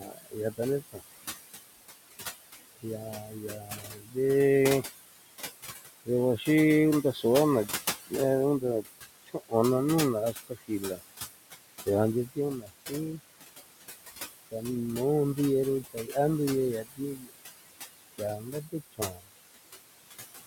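Speech with room noise sitting only about 11 dB below it, and a noise suppressor working hard the whole way through, pulling the background down by about 18 dB. That gap makes the noise pump between phrases, the usual noise suppressor artifacts. It also eats into the speech itself. There's speech cut by the noise suppressor at 0.0 to 1.0 s (drops of about 20 dB, under half a second in total), 2.82 to 4.16 s (about 11 dB, roughly 0.7 s), 6.06 to 13.2 s (about 21 dB, around a second) and 14.51 to 19.24 s (about 20 dB, around a second). In those stretches, soft bits get treated as noise and come out swallowed.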